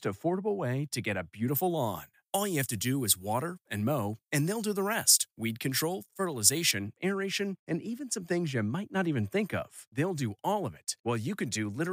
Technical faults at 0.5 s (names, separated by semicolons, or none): none